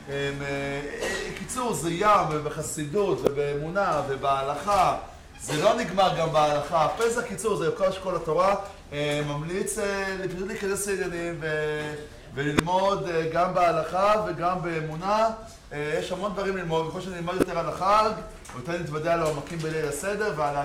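Three short bursts of garbage cut through the sound, at 3.25 to 3.28 s, 12.57 to 12.60 s and 17.40 to 17.43 s, each a corrupt frame decoded: damaged compressed frames played anyway, throwing energy to wrong frequencies for two to three frames, with error peaks around -5, 0 and -5 dBFS.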